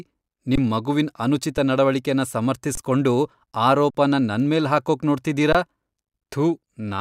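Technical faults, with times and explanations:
0.56–0.58 s, 1.57 s, 2.75–2.77 s, 3.90–3.95 s, 5.53–5.55 s: underrun with held sample. The speech freezes into a flat plateau for about 21 ms (just before "ಮಗುವಿನ್ ಅನುಚಿತ ನಡವಳಿಕೆನ", again right after it, and after "ನನ್ಮೇಲ್ ಹಾಕೋಕ್ ನೋಡ್ತಿದೀರ"), 4.5 ms and 43 ms. The output buffer emptied and the converter held its last value, so each gap begins almost silently. Roughly the same span of live audio was lost each time. The 21 ms and 43 ms gaps fit one or two 1024-sample buffers at 48 kHz.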